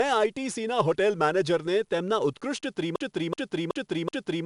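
From the start, the speech carries 4-bit ADPCM compression: a gritty hiss rides on every loud syllable and rises and falls with the level, and sharp attacks distort. Nothing is present above 10.6 kHz, which points to a low sample rate and an 88 kbps stream.

At 2.96 s a broken-record loop begins. A 0.38 s fragment repeats exactly, back to back, four times until the clip ends. The speech that belonged there is gone, likely because the player or stream stalled on its last buffer.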